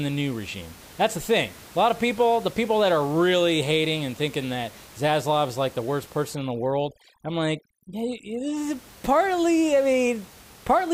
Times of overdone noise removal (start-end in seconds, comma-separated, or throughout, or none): 6.35-8.57